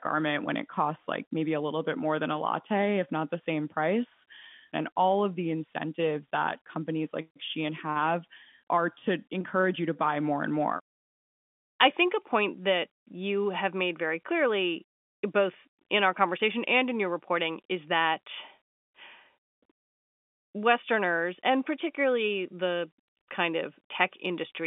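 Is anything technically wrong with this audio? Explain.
No, nothing is technically wrong with this audio.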